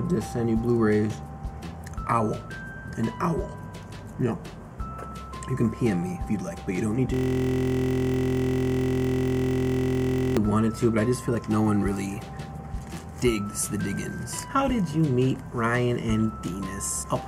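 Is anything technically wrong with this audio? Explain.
Yes. There is a system hang loop from 7.14 s to 10.37 s. The computer or its audio driver stopped supplying new data while the sound hardware kept replaying its ring buffer. A 23.22 ms slice of audio repeats exactly, about 140 times over those three seconds, which fits a 1024-sample buffer. Because the loop is so short, it comes across as a steady buzz at about 43.1 Hz rather than a stutter.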